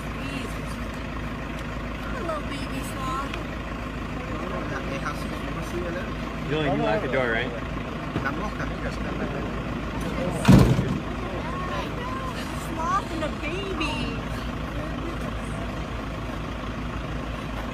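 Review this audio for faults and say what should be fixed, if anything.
No faults found; nothing to fix.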